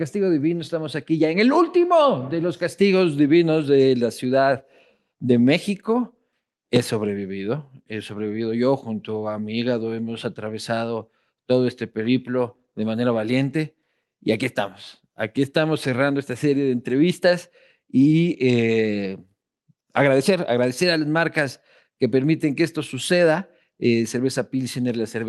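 No technical faults are audible.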